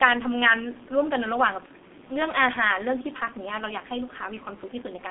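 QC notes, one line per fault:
Throughout, G.723.1 codec: the speech is squeezed into a narrow 200 Hz to 3.6 kHz band and heavily coded at around 6.3 kbit/s, so it comes out muffled and hoarse. The coarse 30 ms frames and sluggish voice model smear the consonants, and the faint room noise, about 37 dB down, gets dragged along too.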